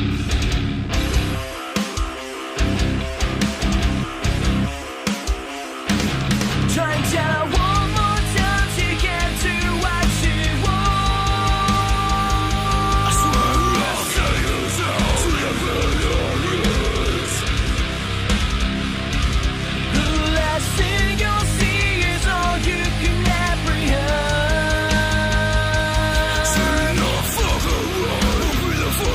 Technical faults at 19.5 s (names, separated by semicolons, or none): adaptive stream at a lower bitrate